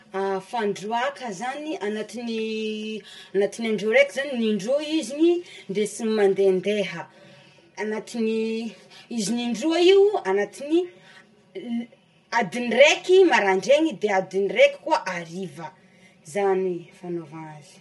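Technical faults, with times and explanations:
throughout channel delay (comb filtering): one channel arrives around 5 ms late and the pair is summed to mono, carving evenly spaced notches from near 100 Hz upward, so the speech sounds hollow and phasey.
throughout low-delay AAC compression: likely AAC-ELD at a bitrate that fits about 32 kbps; its short frames blur harmonics, leaving speech rough and grainy, with nothing above 11.6 kHz.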